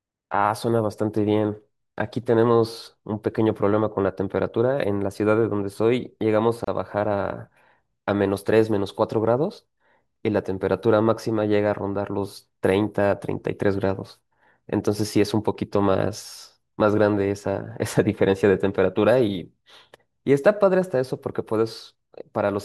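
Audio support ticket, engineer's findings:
Gap at a join of encoded pieces, 6.64 s: short dropout in the speech, about 31 ms, edges smeared. Looks like separately encoded segments stitched without trimming encoder delay and end padding. Speech resumes right where it cut off.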